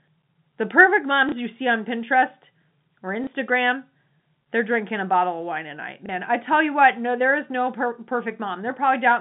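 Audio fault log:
1.29, 3.24 and 6.06 s: packet loss with last packet repeated. Each is a small blip of about 30 ms, a tiny hiccup. At each point a 30 ms stretch of audio went missing, which fits one lost 30 ms packet, and the receiver filled the gap by replaying the previous packet. That replay seldom lines up with the pitch cycle, heard against the narrow, telephone-band G.711 sound of the line.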